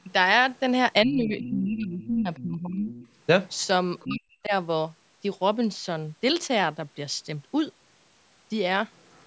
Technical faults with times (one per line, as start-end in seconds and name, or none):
1.05-2.91 speech suppressed in double talk
1.25-1.54 other side's voice leaking through
2.02-2.44 other side's voice leaking through
2.85-3.09 other side's voice leaking through
3.49-3.67 other side's voice leaking through
3.99-4.16 other side's voice leaking through
4.05-4.52 speech suppressed in double talk
8.96-9.27 other side's voice leaking through